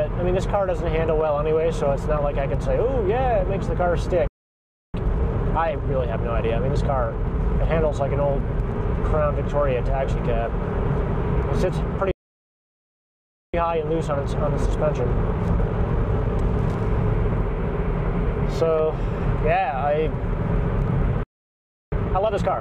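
At 4.27 s the sound cuts off abruptly and stays silent for about 0.66 s, until 4.94 s. The same thing happens from 12.11 s to 13.54 s (about 1.42 s) and from 21.23 s to 21.92 s (about 0.69 s). Each is a playback stall, likely the player running short of data or its thread being blocked. On a waveform each shows as a flat line between hard edges, and on a spectrogram as a blank vertical band across all frequencies.

After each gap there is a time-compressed catch-up. From 4.94 s to 7.94 s the audio runs about 1.1 times faster, from 13.54 s to 16.54 s about 1.15 times faster, and from 21.92 s to the end about 1.5 times faster. The pitch stays normal because the player trims its backlog by cutting out small slices and cross-fading the joins. The spectrogram shows unshifted harmonics but squeezed timing, with small smeared seams at the splice points.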